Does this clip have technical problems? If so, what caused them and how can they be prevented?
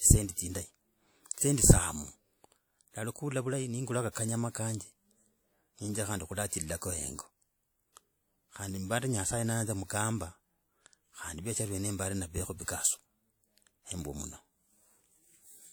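Yes, there's pre-echo at 1.34, 4.11, 6.77, 9.85 and 12.64 s. A short hiss creeps in 38 to 54 ms before each sharp speech attack, because the codec spread that block's quantisation noise into the quiet lead-in. Switching to shorter transform blocks on transients, or encoding at a higher bitrate, would prevent it.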